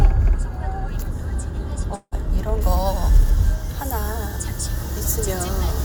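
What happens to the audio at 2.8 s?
Pre-emphasis left on from 2.61 s to the end: the treble boost, matching a 75 µs FM curve, was never undone, leaving 10 kHz about 13 dB hotter, so the sound turns thin, bright and hissy.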